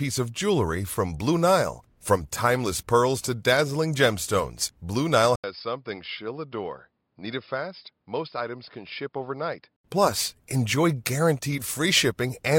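Input switched to a poorer device, from 5.36 to 9.84 s in this speech clip: after an 80 ms gap, the sound turns dull with nothing above 5.2 kHz, drops roughly 10 dB, and gains faint new background noise, likely because recording moved to a narrower-band microphone.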